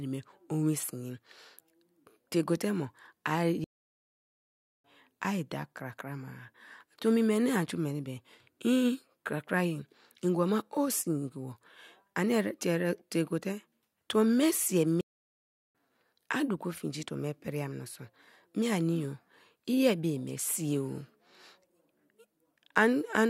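At 3.64 s the speech just cuts out mid-flow and there's dead silence for about 1.2 s until 4.84 s, when it carries on. It happens again right after "tuo me sii", silent from 15.01 to 15.75 s, roughly 0.74 s. Both are playback stalls: the player was likely starved of data or had its thread blocked, so output went quiet until it caught up.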